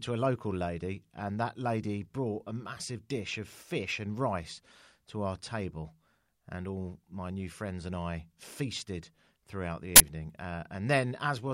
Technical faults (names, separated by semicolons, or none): uninitialised buffer